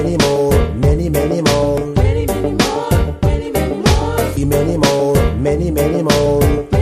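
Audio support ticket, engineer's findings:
Short glitch (chirp, squawk, click or brief hole) at 1.78–1.81 s and again at 4.37–4.40 s, each about 32 ms. Damaged data in the compressed stream: corrupted bytes make the decoder misread frames and lose sync, then resync at the next valid frame header.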